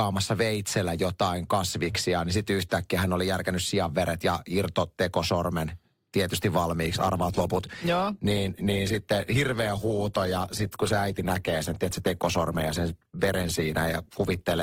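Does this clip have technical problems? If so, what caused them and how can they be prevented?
Yes. From 6.83 s, right after "sianveret ja irtotekosormen tietysti", to the end, the speech shows an adaptive stream at a lower bitrate. Codec artefacts rise because the player switched to a cheaper rendition when the connection slowed, consistent with Opus dropping from 64 to 16 kbit/s. Packet loss would leave gaps or glitches; here there is no gap, only a sudden quality step that lasts to the end. A larger playback buffer or a higher minimum bitrate for the stream would prevent it.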